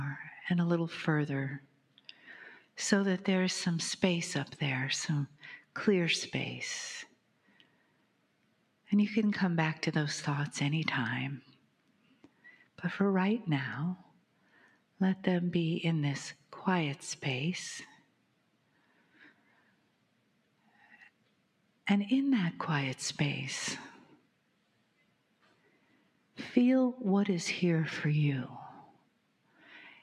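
A noise suppressor made for speech has been applied to music or sounds, and it stays on for the whole clip. It treats steady tones, ambience and decay as noise. The level keeps swinging by roughly 10 dB as it clamps down and lets go. Sharp onsets pass. Sustained parts and tails sink. The result pumps and thins, with a fluttering, uneven body.

The sound is cut by the noise suppressor in five stretches: 1.59 to 2.77 s, 5.29 to 8.89 s, 11.42 to 21.85 s, 24.04 to 26.38 s, and 28.86 to 30.02 s. In each stretch the gain drops by as much as about 12 dB. The drops are intermittent, not continuous. The long middle stretch loses several seconds in total. Held material fades early and decays are chopped short, while sudden sounds still come through.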